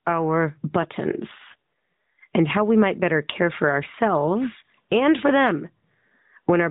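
Gain pumping runs through the whole clip, with the gain swinging by roughly 15 dB. The likely cause is input gain set far too high, with a fast limiter clamping it down on each peak.

An AMR rate drop follows from 1.32 to 2.34 s, ending just before "and how we might". The band stays the same and nothing drops out, but the speech turns buzzy and synthetic, which fits the codec falling from 12.2 to 4.75 kbps before recovering to its normal, lightly coloured narrowband sound.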